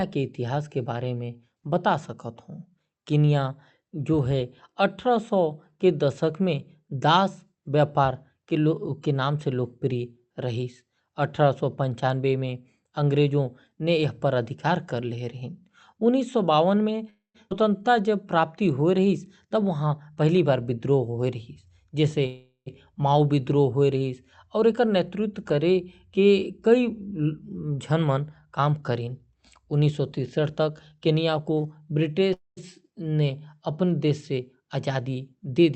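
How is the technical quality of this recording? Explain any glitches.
The speech has audible network glitches from about 17 s onward: three call audio freezes, one skip ahead, and three spells of jitter buffer speed-up. The band tops out around 8 kHz, which fits Opus at about 48 kbps.

Call audio freeze, at 17.09–17.36 s, 22.26–22.68 s and 32.33–32.59 s: packets were likely held up, so the buffer ran dry. The last sound is stretched into a fading buzz, then near-silence. Speech resumes intact but late.

Skip ahead, at 17.50–17.53 s: while later audio was already waiting, roughly 150 ms was dropped. The speech jumps forward with almost no gap, losing a fragment.

Jitter buffer speed-up, at 19.27–20.24 s (110%), 24.58–26.19 s (107%) and 28.45–31.79 s (108%): excess buffered delay was trimmed by cutting pitch periods. The speech sounds hurried at unchanged pitch.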